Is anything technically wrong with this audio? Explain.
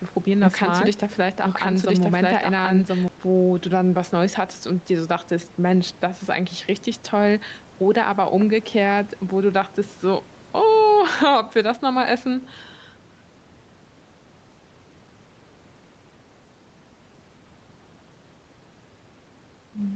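Yes. Gain pumping runs through the whole clip. The gain swings by about 5 dB, likely from input gain set too high with a fast limiter clamping it down. Unlike a noise gate, the background never cuts out entirely. The room noise sits about 28 dB under the speech, and nothing is heard above 8 kHz.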